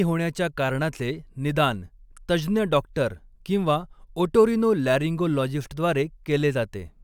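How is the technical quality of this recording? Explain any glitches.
No technical glitches can be heard in this recording.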